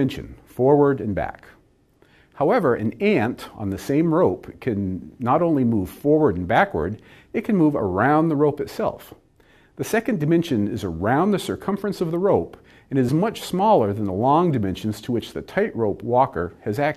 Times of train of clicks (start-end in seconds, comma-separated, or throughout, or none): none